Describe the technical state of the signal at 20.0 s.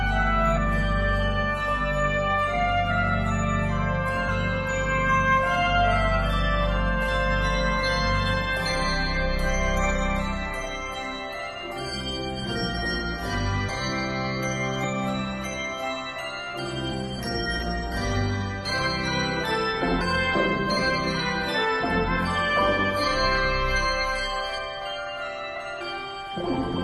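At 20.0 s, compressed frames are skipped: roughly 200 ms of audio, about seven frames of what looks like a 26.1 ms frame length, never plays. The sound jumps ahead with a short smeared blip, not a click, appearing as a brief discontinuity in the waveform and spectrogram.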